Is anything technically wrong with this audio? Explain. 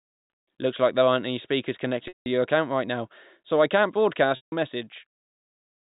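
Yes. Packet loss with pitch repetition occurs twice. At 2.08 to 2.26 s, after "there aren't any speakers" and before "your account right now", about 180 ms of speech went missing. At 4.36 to 4.52 s, after "now so I can't", about 160 ms went missing. Both gaps fit a run of 20 ms packets. In each gap the receiver repeated the last pitch period and faded it over roughly 50 ms, so the sound becomes a brief buzzy hold, drops to silence, then cross-fades back in. The speech is carried by G.711 telephone coding, so nothing above 4 kHz comes through.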